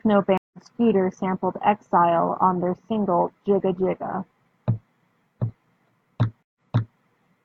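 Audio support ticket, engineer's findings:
Stream reconnect, two events. 0.38–0.59 s: 153 ms dropout, playback resumes roughly a tenth of a second later, skipping audio. 6.43–6.97 s: 126 ms dropout, resumes 418 ms earlier, repeating speech from a server burst. Network link broke; player reconnected with a fresh decoder mid-stream.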